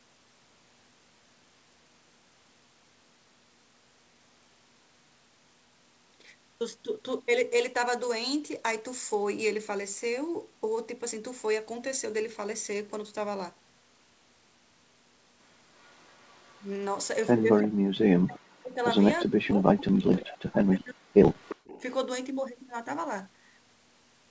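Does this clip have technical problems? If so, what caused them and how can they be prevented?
Yes. There are three kinds of fault in this speech clip.

Echo leak appears at 15.83–16.63 s, 17.57–17.68 s, 19.19–19.23 s, 20.17–20.21 s and 21.37–21.82 s. A delayed copy of the speech trails the original by 349 ms. It sits roughly 15 to 40 dB below the speech. The likely cause is a far-end loudspeaker whose echo canceller let part of its microphone pickup return. Headsets or better acoustic echo cancellation tuning at that end would prevent it.

Speech suppressed in double talk occurs at 17.67–18.8 s and 19.25–21.17 s. The talker's voice drops by up to roughly 40 dB while the echo is present. This was likely the canceller failing to separate near-end speech from echo and attenuating both. A canceller with proper double-talk detection would prevent it.

Background gated by the echo canceller occurs at 21.56–21.67 s. 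For about a tenth of a second, the room sound dips by about 33 dB and then returns. The canceller clamped the microphone hard while the loudspeaker played. Gentler suppression or comfort-noise fill would prevent this gap.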